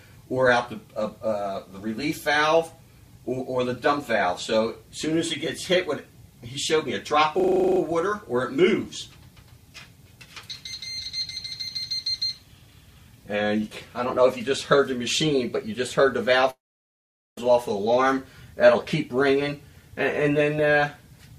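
From 7.4 to 7.8 s, a system hang loop repeats one 40 ms slice ten times. The result is a rigid 25 Hz buzz, with almost nothing lost.

At 16.50 s the sound collapses into a brief fading fill, then silence for 0.81 s. This is likely a long network dropout. Audio resumes at 17.38 s, missing 0.87 s.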